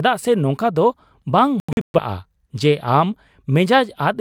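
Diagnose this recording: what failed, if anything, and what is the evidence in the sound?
Reception of the digital broadcast failed, causing a digital broadcast dropout between 1.6 and 2.0 s. The speech cuts to silence in several short holes, the longest 128 ms, totalling 256 ms. The receiver muted on bad frames rather than concealing them, so there are clean gaps instead of smeared or repeated sound.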